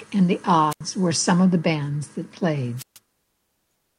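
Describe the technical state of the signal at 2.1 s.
At 2.1 s the speech signal is intact, with no audible fault at that moment.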